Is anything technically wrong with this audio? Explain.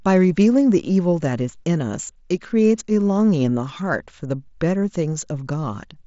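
No, there's nothing wrong with this speech clip, which simply has the wideband sound of an mSBC Bluetooth headset link, topping out at about 7.7 kHz.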